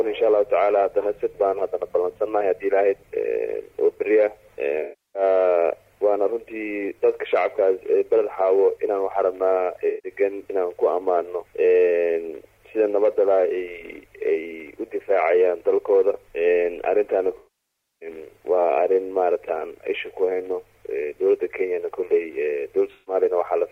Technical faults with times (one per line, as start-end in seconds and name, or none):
4.82-5.22 AAC frame loss with concealment
9.88-10.10 AAC frame loss with concealment
17.37-18.09 AAC frame loss with concealment
22.94-23.14 AAC frame loss with concealment